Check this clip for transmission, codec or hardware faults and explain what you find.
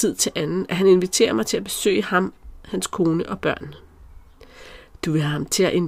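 No transmission, codec or hardware faults are audible anywhere in the speech.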